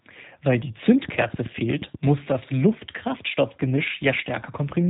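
G.729 codec throughout this speech clip: nothing passes above 3.8 kHz, and the rough, synthetic quality fits 8 kbit/s frame-by-frame rebuilding from a filter and a few pulses. Drift correction step from 2.72 to 3.77 s: speed rises about 5.6% and pitch about 95 cents, nearly a semitone, before snapping back, likely clock-matching software jumping its playback rate.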